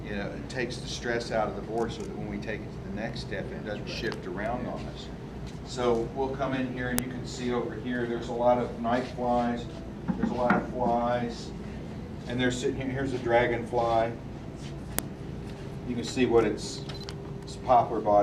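At 6.98 s and again at 14.99 s a sharp, loud snap cuts through the sound: file header played as audio. Pieces of the audio were joined without stripping each piece's WAV header, so a few dozen bytes of header data are played as samples. The two snaps are exactly 8.0 s apart, marking piece boundaries. Unlike a dropout or splice glitch, nothing goes missing, and the snap is just as loud whatever the surrounding signal is doing.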